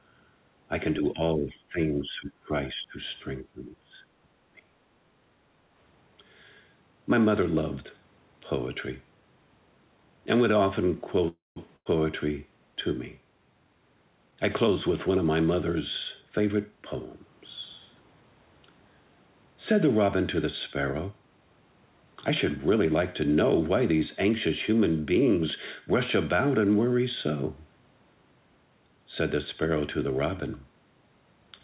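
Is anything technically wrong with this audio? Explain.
Yes. The speech has several call-path faults. The whole clip also stops at 4 kHz, which points to a G.711 mu-law codec at 64 kbps.

Speech suppressed in double talk, at 0.99–2.53, 2.73–2.98, 3.42–4.04 and 4.49–4.73 s: the speech dips by up to about 25 dB, and loses its edge or breaks up. The likely cause is an echo canceller that cannot tell the near talker from loudspeaker echo while both sides speak, so it turns everything down.

Background gated by the echo canceller, 5.12–5.45 s: the room sound drops by about 6 dB for a moment and then returns. The canceller was clamping the microphone while the loudspeaker played and then let go.

Call audio freeze, 11.28–11.58 s: the speech stalls for about 0.28 s. It decays into silence for roughly 0.19 s, then carries on with nothing missing, only delayed. The likely cause is late packets that emptied the jitter buffer, so the receiver stretched the last sound while it waited.

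Burst of packet loss, 11.76–11.87 s: about 93 ms of concealment replaces 100 ms of lost audio. The receiver held the last sound as a fading buzz or hiss, then jumped ahead, so that stretch of speech is gone.

Jitter buffer speed-up, 14.27–15.55 s at 115% and 16.21–16.72 s at 113%: the speech sounds hurried but keeps its pitch. The receiver was draining a jitter buffer that had overfilled. It cut out short pitch-period pieces, about 0.2 s in total in the first stretch and about 70 ms in the second.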